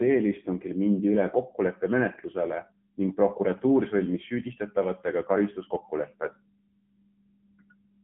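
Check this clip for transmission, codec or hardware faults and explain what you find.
One fault runs through the whole clip: AMR narrowband mobile codec coding. The speech is confined to roughly 150 Hz to 3.4 kHz, with nothing above 3.5 kHz. It has a plainly audible buzzy, synthetic edge from a vocal-tract model rebuilt from a few pulses per subframe, which fits a low mode near 7.95 kbps. A spectrogram would show a flat, empty ceiling above 3.5 kHz throughout.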